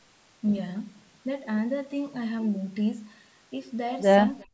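From 4.39 to 4.45 s there is an echo leak: a far-end echo canceller likely failed to remove its loudspeaker signal, so a copy of the speech returns about 357 ms late. It is a brief, very faint scrap, roughly 30 dB below the talker.

From 4.43 to 4.53 s, speech is suppressed in double talk. With both sides active, the canceller likely mistook the talker for echo and attenuated everything. The final 100 ms of speech drops sharply, by as much as roughly 40 dB, nearly vanishing.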